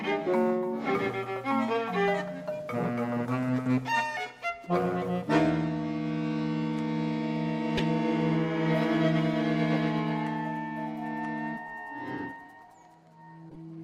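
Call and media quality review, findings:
Corrupt frame decoded: short chirpy noise bursts at 7.77–7.85, 9.74–9.76 and 13.50–13.57 s, loudest first. Decoder played a few bit-damaged frames, misplacing spectral energy.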